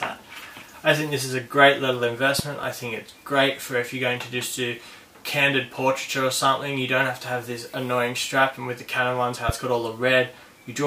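The audio has two loud pop events: a double pop from 2.39 to 2.66 s, about 10 dB above the sound, and a single one at 9.49–9.52 s, about 15 dB above. Unlike a dropout, the sound carries on underneath, likely from a voltage pulse from a plug, switch, static or driver glitch.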